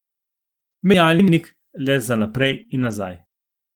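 From 0.94 to 1.28 s there are chunks out of order: an audio chunk of about 85 ms was written late and plays after the chunks that should have followed it. Nothing is missing, but the sequence is scrambled, so the speech briefly jumbles.

Just after "le za", from 2.39 to 2.61 s, is a lost packet rebuilt from error correction. Several packets went missing, and the decoder played the low-bitrate copies carried in the following packets, about 120 ms in all. There is no gap, but the speech turns rougher and noisier there.

Right after that come two short concealed packet losses, at 2.63 to 2.67 s and 2.67 to 2.70 s. Each dropped about 20 ms, which the receiver filled by extending the preceding sound before blending back. The result is a quick smear or wobble.

From 2.70 to 2.92 s, another lost packet is rebuilt from error correction, again about 120 ms of rougher, noisier low-bitrate copies.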